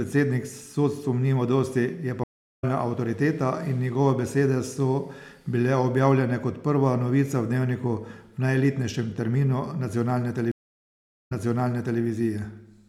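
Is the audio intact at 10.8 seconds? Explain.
No. At 10.8 seconds the audio sits inside a stream reconnect that runs from 10.52 to 12.01 s, just after "najelitnejšem terminu nacionalne". The connection dropped, the player went silent for 0.77 s, then reconnected and restarted its decoder mid-stream. Playback resumes 0.73 s earlier than where it broke off, because the server resent a burst of recent audio, so that stretch of speech is heard twice.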